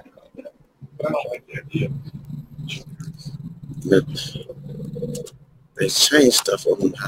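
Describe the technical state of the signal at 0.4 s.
At 0.4 s the signal is intact, with no audible fault at that moment.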